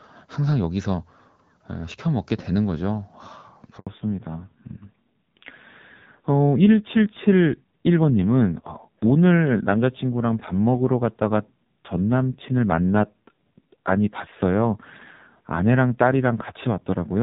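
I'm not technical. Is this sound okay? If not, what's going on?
No, not entirely. At about 3.79 seconds there's a handover gap: the phone switched the call from one network to another, and for roughly 80 ms no speech got through. The voice cuts out abruptly, there's a tiny hole of silence, and it comes back at 3.87 seconds. Whatever was said in that sliver is simply gone. It's short.

Right after that, from 3.87 seconds to the end, there's a fallback to narrowband. Before the switch the call was running on HD Voice, which sounds fairly clear here. After it, the call drops to an older, lower-quality phone codec that throws away everything above 4 kHz. The voice loses its crispness and airiness, sounding duller, more muffled and rougher, like an old-fashioned phone line, and it stays that way for the rest of the clip.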